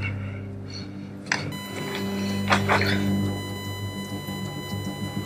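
At 1.52 s a USB whine appears and runs to the end of the clip. Current drawn by the USB bus in 1 ms frames is leaking into the audio through power or ground, producing a fixed-pitch tone built on 1 kHz, with its strongest component at the 2 kHz harmonic. It sits roughly 10 dB below the sound itself. On a spectrogram it shows as flat horizontal lines at 1 kHz and 2 kHz from 1.52 s onward.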